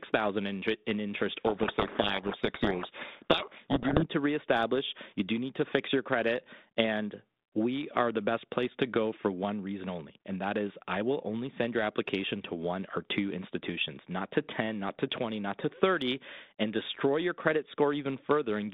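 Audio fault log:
1.46–4.07 s, codec payload misread: after "in interest" the speech is buried in harsh, grinding distortion until "to reestablish you do", because the decoder reads each G.726 code word with its bits in the wrong order. Unlike low-rate ADPCM hiss, it starts and stops abruptly.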